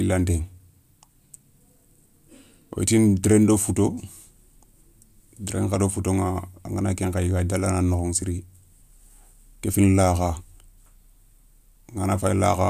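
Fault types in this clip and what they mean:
Nothing stood out on listening to this speech.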